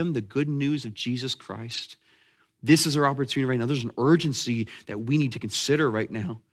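Lost packets rebuilt from error correction at 1.69–1.79 s, 2.67 s and 4.05–4.07 s in this speech: low-bitrate backup copies replace missing packets, so there are no gaps, just brief rougher, noisier patches.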